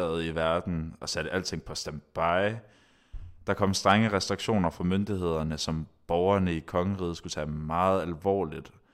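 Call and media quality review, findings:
No audible faults found in this speech recording.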